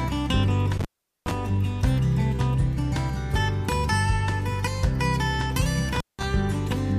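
At 0.77 to 1.34 s, and again at 5.94 to 6.23 s, intermittent contact breaks the signal path. A loose plug or cable briefly opens, cutting the sound out for about 415 ms and then 184 ms, with crackle at each break and reconnection.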